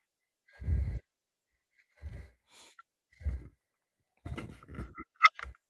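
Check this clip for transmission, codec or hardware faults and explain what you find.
Nothing stood out on listening to this speech recording that would point to a transmission, codec or hardware problem.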